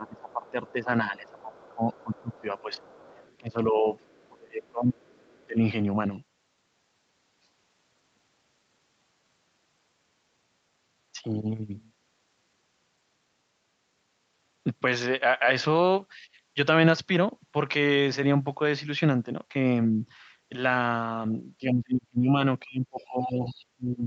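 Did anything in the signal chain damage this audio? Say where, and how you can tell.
Yes. Speech suppressed in double talk, at the call-processing stage. The speech dips about 25 dB over 0–5.6 s, about 5 dB at 16.2 s, and about 30 dB from 21.6 s onward. The likely cause is the echo canceller ducking both talkers.

The other side's voice is leaking through in the echo canceller: a faint second voice at 0.29–0.72, 1.26–3.37, 3.99–5.46 and 23.0–23.65 s, about 25–35 dB down. This is likely residual loudspeaker echo.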